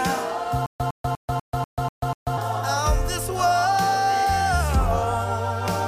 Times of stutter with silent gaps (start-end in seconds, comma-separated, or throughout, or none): 0.66-2.38